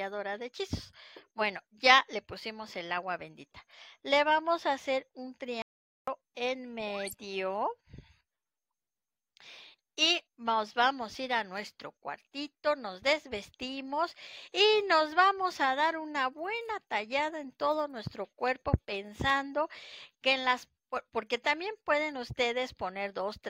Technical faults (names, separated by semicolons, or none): audio dropout to silence